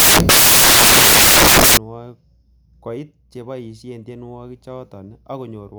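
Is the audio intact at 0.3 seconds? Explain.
No. At 0.3 seconds the clip sits inside a stretch of samples built from the wrong bytes, running from the start to 1.77 s. The reader assembles each sample with its bytes misordered or misaligned, so the rapidly changing low bits become the loudest part of every value. The result is loud, harsh broadband noise in place of the speech, close to white where the speech is loud.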